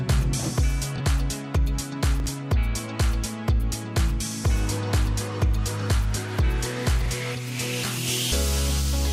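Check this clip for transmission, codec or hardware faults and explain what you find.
Three brief reordering faults, chunks out of order, occur at 0.96 to 1.00 s, 2.20 to 2.26 s and 7.02 to 7.08 s. The audio moves in 20 ms chunks, and in each case one chunk reached the output late: by one chunk at 0.96 s, by two at 2.20 s and 7.02 s. Nothing is missing, but the sequence is scrambled, leaving three abrupt seams per event. Each sounds like a tiny jumbled stutter.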